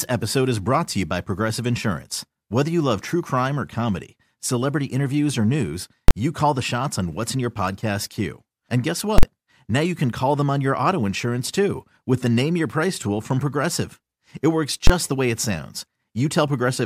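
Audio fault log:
6.08–6.11 s, 9.18–9.23 s and 14.87–14.90 s, invalid numbers at full scale: each is a sudden, very loud bang that cuts through the speech. The first and third last about 23 ms. The one at 9.18 s is a blast twice as long, about 46 ms. A calculation produced infinite or invalid values, which were forced to maximum level for a whole processing block. The lengths fit blocks of 1024 and 2048 samples.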